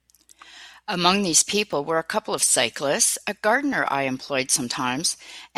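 At 1.73 s and again at 3.73 s the speech skips slightly where the sound jumps forward. This is overlap between stream segments. Two of the roughly one-second segments claimed the same stretch of time, and trimming that overlap discarded sound that existed only once, about 15 ms at the first point and about 6 ms at the second. A waveform shows a sudden discontinuity at each point, and a spectrogram shows a thin vertical broadband line there.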